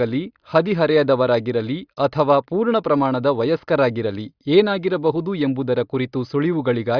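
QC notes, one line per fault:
Nothing to flag here; the speech runs its whole course without any technical trouble worth a note.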